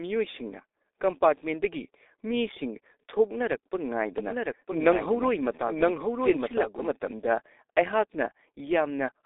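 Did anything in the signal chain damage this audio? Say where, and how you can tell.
Yes. At the codec stage, G.723.1 coding runs throughout: nothing above 3.8 kHz, a hoarse, muffled sound and smeared consonants, which fits a heavily compressed 6.3 kbit/s stream.

From 4.18 to 6.90 s, a doubled audio track appears: a dry, full-band copy about 5 dB down trails by roughly a second, likely from an edit or a second capture path.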